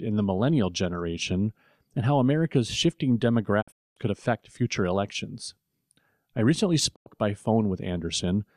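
The speech drops out twice with a digital broadcast dropout. From 3.61 to 3.98 s it fades out over about 20 ms into a broken stretch of silence, roughly 290 ms lost across 340 ms with one 240 ms hole, before "could affect future elections". After "I recently" it mutes again, from 6.94 to 7.08 s, for about 100 ms. Each time the receiver got bad or missing frames and muted until clean ones arrived.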